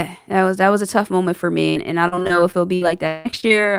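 From 1.69 to 3.52 s, the audio stream repeatedly lost packets or received them too late, producing repeated packet loss with a robotic sound. The receiver covered some holes by stretching the last good sound forward, about 464 ms in total and roughly a quarter of the stretch, while about 480 ms simply dropped out. The longest hole is about 178 ms. The speech comes through choppy, with pieces missing in quick succession.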